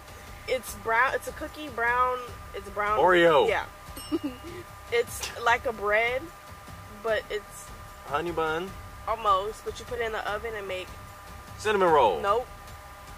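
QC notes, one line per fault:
No fault to note.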